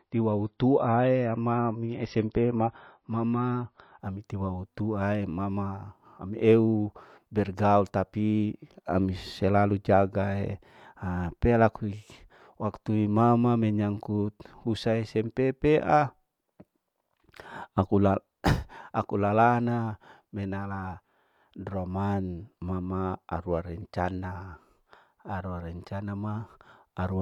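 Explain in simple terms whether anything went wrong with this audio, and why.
Something did go wrong, but only at the very start. For the first 4 seconds, the speech sounds dull and smeared. The crisp top end is gone, with nothing above about 5.8 kHz. This is an adaptive stream starting at a low bitrate. The player began with a cheap, heavily squeezed version so playback could start fast. Once it had judged the connection, it switched to a better version. At 4.0 seconds the sound suddenly gets clearer, without any break.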